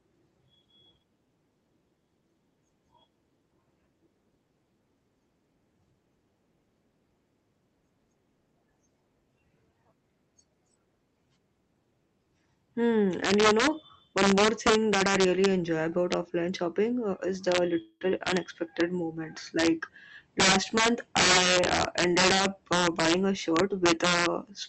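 At 17.81 s, right after "shopping uh is the", there is a call audio freeze lasting to 18.03 s, likely from packets held up until the jitter buffer ran dry. The last sound stretches into a fading buzz that, within roughly 190 ms, ends in about 60 ms of silence, before "unexpected moments" resumes intact. On a spectrogram this appears as smeared, flat horizontal bands thinning into a blank strip. The waveform decays into a flat line.

From 22.06 s to 24.52 s a jitter buffer speed-up trims short pitch-period chunks, about 150 ms in total, so the audio plays roughly 6% fast at unchanged pitch and sounds slightly hurried. On the spectrogram the harmonics stay at the same height while syllables sit closer together. In the waveform the cuts are too small to see individually. Across the clip the content above 8 kHz is absent, as expected for the Opus call path.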